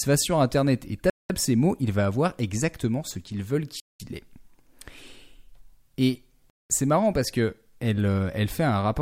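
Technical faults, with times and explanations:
1.10–1.30 s, 3.80–4.00 s and 6.50–6.70 s, gap between chunks: the speech stops dead for 200 ms each time, with hard edges. It's arriving in 2.5 s chunks with silence inserted at each join, so nothing's lost, just interrupted every 2.7 s.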